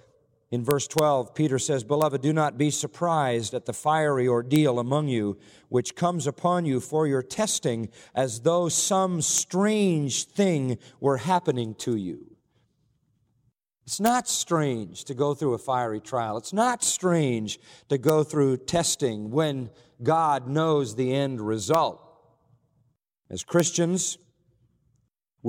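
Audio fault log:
0.71–0.99 s, 2.02, 4.56, 9.38, 14.06–14.08, 18.09, 21.74, 23.60 s: integer overflow. Loud speech peaks exceed the largest integer and wrap to the opposite sign instead of limiting. Each peak over the limit jumps across the full range, causing sharp, violent cracks far harsher than clipping.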